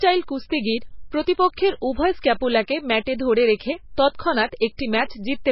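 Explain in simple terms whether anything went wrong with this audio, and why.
The whole speech recording, from start to finish, has heavy damage that is likely from MP3 compression. Nothing above 5.6 kHz remains, so it sounds dull. The starved encoder drops faint detail unevenly, which makes the sound watery and swirly, with metallic chirps on s sounds and smeared attacks.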